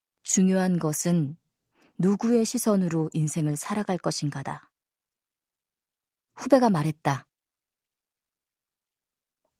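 No technical faults detected anywhere in the speech.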